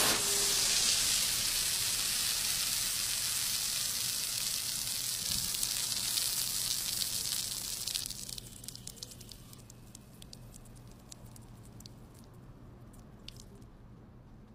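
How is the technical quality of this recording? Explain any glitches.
The recording has four short glitches from damaged data in the compressed stream, at 3.48 to 3.52 s, 8.00 to 8.05 s, 9.54 to 9.59 s and 12.22 to 12.26 s. Each lasts 40 to 50 ms. Corrupted bytes make the decoder misread frames and lose sync until it finds a valid header, producing a brief chirp or blip.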